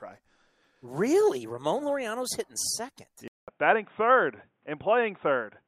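At 3.28 s a 200 ms gap, then dull speech cut off above 3.8 kHz over a faint new noise floor, likely an input switched to a poorer device.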